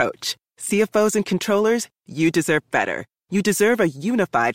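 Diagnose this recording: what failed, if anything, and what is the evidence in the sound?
Nothing in the signal chain has failed, and the speech arrives intact and continuous, with no audible evidence pointing to any stage of capture, transmission, storage or playback.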